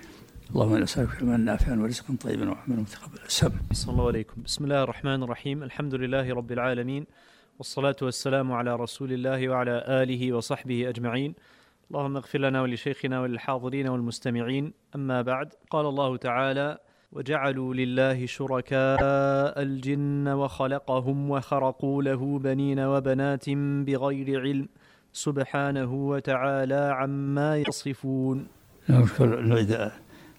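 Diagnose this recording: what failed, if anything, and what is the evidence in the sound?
Codec stage, likely a broken MP3 bit reservoir. At 18.95–19.01 s and 27.63–27.70 s the audio jumps ahead and two or three 26.1 ms frames decode garbled, reading reservoir bytes from the wrong frame. A plain dropout would simply go silent.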